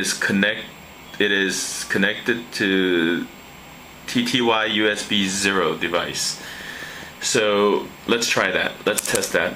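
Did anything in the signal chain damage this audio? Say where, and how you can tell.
Yes. From 6.41 s to 9.53 s a steady ticking rides over the sound: a train of clicks, about fifteen near-identical pulses at a regular 4.8 per second, each roughly as loud as the program material and audible in the gaps too. Identical shape and an even pace point to a periodic external source rather than damage within the content. The likely cause is interference coupling into the analogue wiring or a faulty connection or power supply injecting a repeating pulse.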